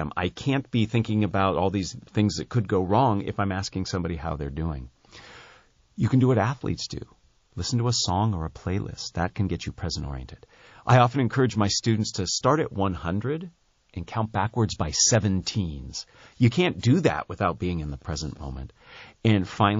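Throughout, the speech sounds watery, with dull treble and swirling sibilants, likely from MP3 compression at a low bitrate, which fits roughly 32 kbps. Pre-echo occurs at 15.43 to 15.46 s and 16.79 to 16.83 s: with no switch to short blocks, quantisation noise from each 72 ms window spreads ahead of the attack, audible as a hiss about 12 dB and 14 dB above the surrounding noise.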